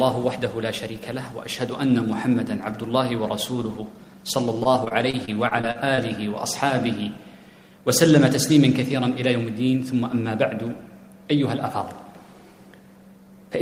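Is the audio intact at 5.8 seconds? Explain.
No. At 5.8 s the audio sits inside a stretch of repeated packet loss (robotic sound), 4.63 to 6.0 s. Ten short gaps, the longest 34 ms, are patched by extending the previous sound. The result is choppy, with pieces missing. A spectrogram shows frozen, smeared slices between sharp vertical seams, and the waveform shows repeated cycles.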